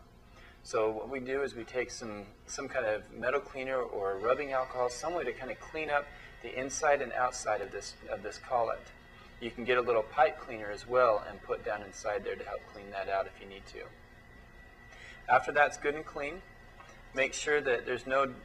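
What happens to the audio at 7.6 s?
At 7.63 s the audio jumps forward: a short stretch, about 20 ms, is missing and the material on either side is butted together with no gap of silence in between. The likely cause is a dropped buffer (overrun), where the capturing program fell behind and the hardware overwrote a block of samples before they were read, so that block never reached the recording and the stream simply resumes further along.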